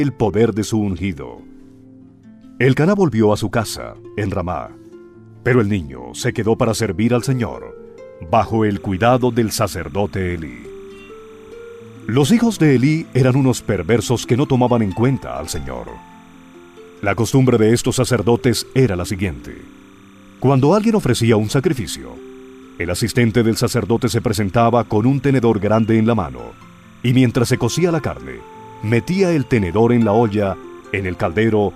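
From 8.77 s to the end, timecode bleed sits behind the sound. Linear timecode from a nearby track or cable is leaking in. Its square wave flips between tones around 1 and 2 kHz, running at 29.97 frames per second. It gives a faint, steady chirping warble well below the sound.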